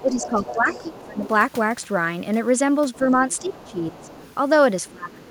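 Speech with two related faults. The other side's voice leaking through is heard as a second voice at 0.0–1.28 s (about 15 dB below the talker), 3.31–4.35 s (about 25 dB below), and in brief scraps at 2.93–2.98, 4.85–4.9 and 5.25–5.31 s (about 30 dB below). This is likely loudspeaker echo that the echo canceller left in, and it adds a voice rather than removing one. The speech suppressed in double talk is the opposite effect: the main voice itself dips or cuts in pieces while the other voice is present. This happens by about 10 dB across 0.02–1.27 s and 2.98–4.09 s, and by up to about 20 dB across 4.91–5.27 s. The likely cause is the canceller turning everything down during overlap.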